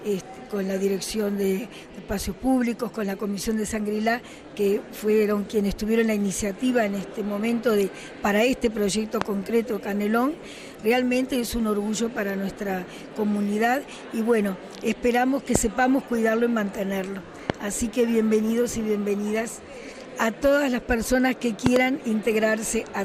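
The whole thing has a dull, gurgling, grainy quality, with the top end coming and going. That points to MP2 compression, likely at a low rate around 80 kbps, where upper sub-bands get switched off and the rest are coarsely quantised. On top of that, loud pops about 20 dB above the sound hit at 9.22–9.24 s, 15.55–15.58 s and 17.50–17.52 s, plus a double pop at 21.66–21.78 s, likely from electrical steps such as switching or static, with the sound carrying on underneath.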